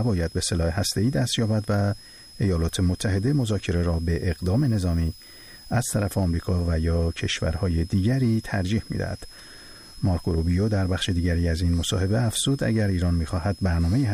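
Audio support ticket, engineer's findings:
Switching supply whistle, throughout the clip. High tone wandering between 5.07 and 5.19 kHz, sitting roughly 25 dB under the signal. Probable cause: a switching regulator in the audio path's power feed dropping into audible burst mode, its cycling frequency drifting with load.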